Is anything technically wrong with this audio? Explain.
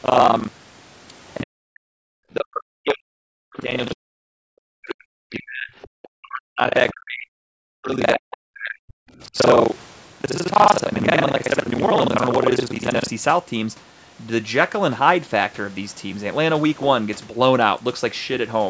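Yes. The speech carries three kinds of fault, heard through call microphone processing that leaves nothing above 8 kHz.

Buffer tearing, from 0.0 to 13.09 s: the writing program and the playback hardware have slipped, so their positions cross inside each buffer. Roughly half of every buffer replays audio from around 70 ms earlier, with hard joins on both sides. The result is a robotic 25 Hz buzz, which fits a buffer period of 40 ms, and it sounds only while signal is present.

Speech suppressed in double talk, from 1.43 to 5.7 s and from 6.02 to 9.37 s: the likely cause is an echo canceller that could not separate this talker from far-side sound on the loudspeaker, so it turned both down. The voice dips, loses its high end or cuts out in pieces, by about 40 dB at its deepest. Roughly 4 s of the first stretch is affected, and roughly 2 s of the second.

Other side's voice leaking through, from 5.82 to 5.88 s: this is likely residual loudspeaker echo that the canceller failed to remove from the microphone. 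A brief scrap of a second voice comes through, around 25 dB below the main speech.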